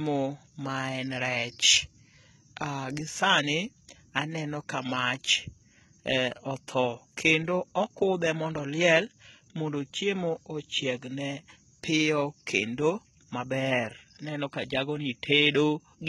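From start to finish the speech carries heavy damage that sounds like HE-AAC compression, likely at a very low rate, which fits something around a 16 kbps stream. Only the lower band seems properly coded; the treble is rebuilt by copying lower content upward, so it doesn't match the real harmonics. The s sounds come across gritty and metallic or lispy, and there's nothing at all above about 11.8 kHz.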